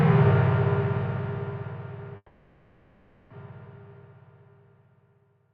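At 2.16 s the audio freezes for about 1.1 s, until 3.31 s: the last sound is stretched into a fading buzz or hiss, with about 40 ms of silence, then carries on where it stopped. That's a call audio freeze, likely from delayed packets draining the jitter buffer. Nothing is lost, but everything after runs 1.14 s late.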